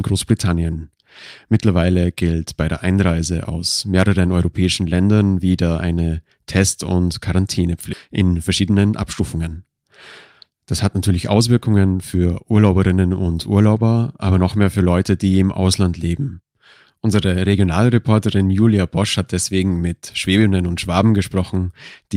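Speech, with two timing faults. A skip ahead happens at 7.93 to 7.95 s. Nearly half a second of speech is simply gone. There is no filler and no silence, and the two sides of the cut butt straight together. That stretch had been dropped, on the way or by the jitter buffer when it overflowed, while later audio was already waiting, so playback jumped forward. The delay fell by about the same amount. A jitter buffer speed-up follows shortly after, from 8.13 to 9.50 s. The speech runs at about 111 percent of normal speed, yet the pitch stays the same. It sounds hurried. The buffer still held more audio than its target. It trimmed many tiny slices of one or a few pitch periods, removing roughly 150 ms in total, to bring the delay back down.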